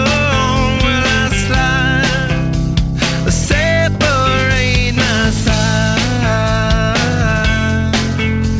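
No technical faults can be heard anywhere in the clip. It has come through a WebRTC call path, and with nothing above 8 kHz the band limit points to a wideband call codec such as G.722 at 64 kbps.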